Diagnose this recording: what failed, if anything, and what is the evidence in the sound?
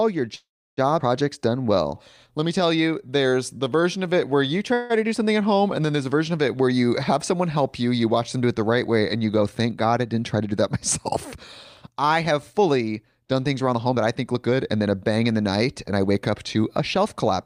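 Network and jitter-buffer stage, call audio freeze. Packets were likely held up in transit and the jitter buffer ran dry twice. From 0.35 to 0.79 s the receiver stretched the last sound across about 420 ms, and it fades into roughly 330 ms of silence. From 4.74 to 4.92 s, after "it where you", a 160 ms fill buzzes on without reaching silence. Speech then resumes intact with "to do something at", later by the length of the gap.

Jitter buffer, skip ahead. At 0.99 to 1.02 s, just after the first freeze, playback jumps forward, which fits the buffer shedding the backlog that had piled up. Around 300 ms of speech is gone, and the two sides are butted together with only a 7 ms join. A listener hears a sudden discontinuity where a fragment of the utterance simply vanishes.

Jitter buffer slow-down. From 1.38 to 4.10 s the buffer was rebuilding its reserve by repeating single pitch periods over and over. 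That added about 256 ms, so the speech runs at 91% speed while the pitch holds. The stretch leading into "it where you" sounds drawn out and slightly sluggish, with vowels lingering longer than natural.

Jitter buffer speed-up. Later the buffer was over-full, as when delayed packets arrive in a burst, and it trimmed short pitch-period slices repeatedly to cut latency. This happens at 10.13 to 10.64 s (109% speed, roughly 50 ms removed), at 11.35 to 12.69 s (105%, roughly 70 ms), and from 13.73 to 17.27 s after "done things" (111%, roughly 400 ms). The pitch stays put but the delivery sounds hurried and compressed.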